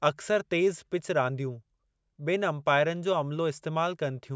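No technical faults can be heard anywhere in the speech.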